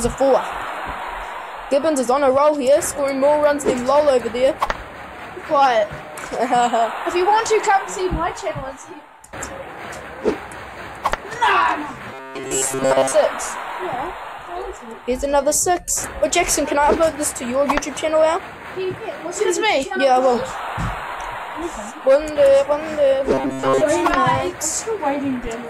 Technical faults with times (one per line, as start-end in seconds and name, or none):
12.14-13.15 robotic sound from repeated short buffers
23.34-23.82 robotic sound from repeated short buffers